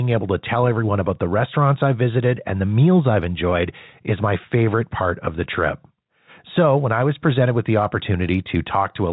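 No technical faults are audible.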